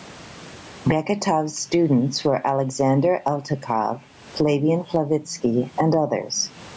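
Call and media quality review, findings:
Gain pumping, throughout the speech. Gain swings roughly 25 dB. Level contrast is squashed. Likely cause: input gain set far too high, with a fast limiter or compressor clamping each peak and then releasing. Room noise about 44 dB below the speech; band-limiting to 8 kHz from the call microphone processing is expected.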